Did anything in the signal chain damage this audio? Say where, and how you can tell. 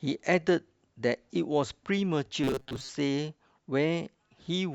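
Yes. In the driver or buffer stage, new audio likely arrived too seldom, so roughly half the time was filled by replaying a segment of about 7.5 ms. From 2.44 to 2.90 s this robotic sound from repeated short buffers becomes a rigid, metallic 133 Hz buzz.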